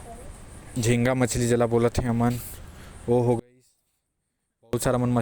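One channel inverted, from 3.39 to 4.73 s: the speech suddenly collapses by about 36 dB, leaving only a faint remnant before full level returns. The likely cause is one stereo channel with reversed polarity. When the two channels are summed to mono, everything common to both cancels, and centred material like a voice and its low end mostly disappears. Only the small difference between the channels survives.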